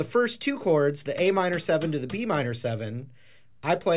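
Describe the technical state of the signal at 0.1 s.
At 0.1 s the signal is intact, with no audible dropout, clipping, distortion or other technical fault.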